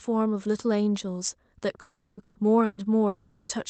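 From 1.81 to 2.20 s the sound smears into a fading buzz and hiss for about 360 ms, then a brief silence of roughly 20 ms before it resumes further on. This is likely a long network dropout, with the receiver stretching the last sound to cover audio that never arrived.

Two bursts of packet loss follow, at 2.23 to 2.38 s and 2.65 to 2.80 s. In each, about 120 ms is replaced by a held buzz or hiss that dims before the sound jumps ahead. They are shorter than the dropouts and never decay into silence.

From 3.07 to 3.52 s what is likely a second long network dropout covers about 420 ms. The concealment runs far past a burst's length, fading as it goes, and no silence remains before the sound returns with that stretch missing.

The call path's codec limits the audio to about 8 kHz, which fits a wideband call setting.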